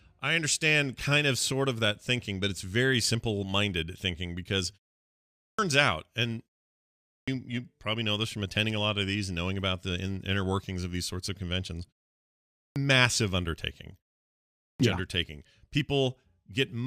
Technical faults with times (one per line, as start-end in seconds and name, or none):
5.18-5.59 clipped start after a pause
6.81-7.28 clipped start after a pause
12.33-12.76 clipped start after a pause
14.36-14.80 clipped start after a pause